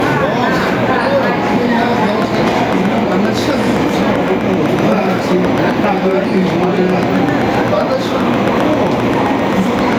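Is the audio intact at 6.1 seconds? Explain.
No. Gain pumping runs through the whole clip. The level is likely set too high, so a fast limiter pulls the level down on every loud sound, swinging it roughly 5 dB. A train of clicks also covers 2.09 to 9.94 s. About 7.7 regular ticks per second poke roughly 5 dB above the sound, likely from interference or a faulty connection.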